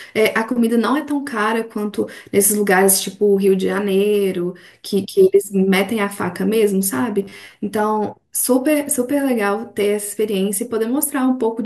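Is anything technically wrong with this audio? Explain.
Yes. From 7.22 to 7.56 s, new audio likely arrived too seldom, so short buffers were replayed over about half that stretch, creating robotic sound from repeated short buffers: a rigid, metallic 100 Hz buzz, consistent with 10 ms repeats.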